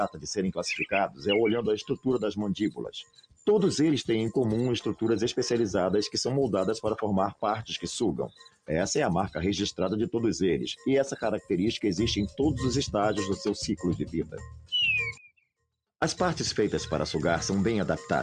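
From the start, a noise suppressor built for speech is applied to the sound. It treats sustained tones and decaying tails as noise, so the level pumps by around 10 dB as held material is pulled down while transients pass through largely intact.

The suppressor cuts the sound more heavily at 0.09–0.31 s, 1.08–1.26 s, 1.82–2.06 s, 2.70–3.47 s, 8.28–8.69 s and 14.03–14.72 s, with drops of about 15 to 21 dB. Sustained parts sink and decays are truncated, leaving the sound hollow and choked.

From 15.18 to 16.02 s, the level falls by about 22 dB and what remains sounds faint and weakened. The likely cause is one channel inverted: with reversed polarity, the shared content cancels when the channels are summed to mono, leaving only their difference.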